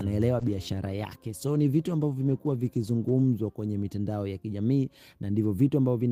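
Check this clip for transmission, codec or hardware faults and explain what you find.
There's one fault: a call bitrate drop from 0.4 to 4.25 s. The encoder got starved of bits, consistent with roughly 40 down to 18 kbps. It sounds coarse and muffled, worst for about 2.5 s.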